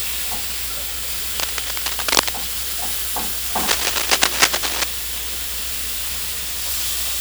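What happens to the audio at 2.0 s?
A worn cable or connector was likely being moved, its contact resistance jumping about, so from 1.39 to 2.29 s cable scratch noise rustles over the audio at roughly the same loudness.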